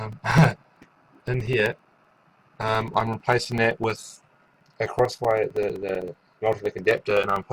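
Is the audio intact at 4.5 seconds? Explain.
No. At 4.5 seconds the sound carries evenly spaced ticks from periodic USB or driver dropouts, which run from 0.06 to 7.43 s. Every 64 ms a blocked bus or driver loses a few milliseconds of audio, filled with silence.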